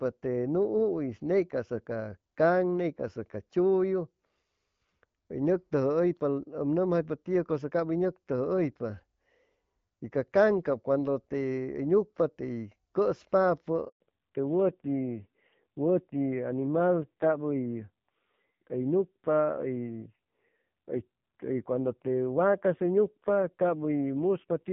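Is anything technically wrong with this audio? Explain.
Yes, there are two faults.

The handover gap runs from 13.88 to 14.00 s. The call is passed from one network link to another, and for those 120 ms no speech frames reach the receiver. The sound dies away within a few tens of milliseconds and leaves a short, hard silence. Whatever was said in that window is gone rather than muffled, and the audio resumes once the new link delivers frames.

The fallback to narrowband starts at 14.00 s and lasts to the end. Before that point the wideband HD Voice path carries the call with only light coding damage, at a quality that fits roughly 12.65 kbit/s AMR-WB. After the handover the call drops to the older narrowband codec, and nothing above 4 kHz survives. Sibilants and airy consonants lose their edge, and the speech sounds duller and rougher, which fits a low narrowband mode near 5.9 kbit/s.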